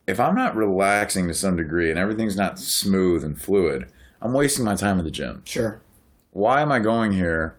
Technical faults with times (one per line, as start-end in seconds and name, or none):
6.44-7.09 jitter buffer speed-up